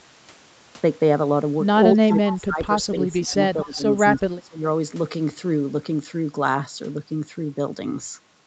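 From 1.94 to 2.7 s the speech sinks and thins, dropping by about 20 dB at its deepest, then recovers. This is speech suppressed in double talk, most likely because the far side was talking at the same moment. The echo canceller could not tell this talker from its own loudspeaker echo and pulled the level down on both. The same dipping returns at 3.01 to 3.36 s and 3.54 to 3.84 s, by about 15 dB each time, and most heavily at 4.2 to 4.63 s, by about 25 dB.

Inside the first dip, between 2.29 and 2.39 s, a faint, brief trailing copy of the sound appears about 245 ms behind the original and roughly 15 dB below it. That is an echo leak, likely from a loudspeaker on the other end whose echo canceller let a scrap of picked-up audio slip back into the call.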